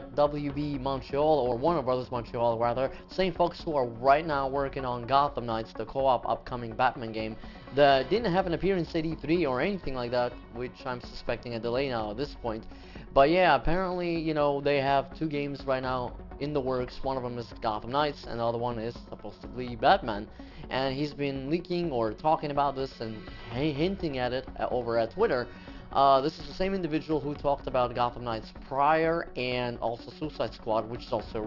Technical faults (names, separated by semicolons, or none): aliasing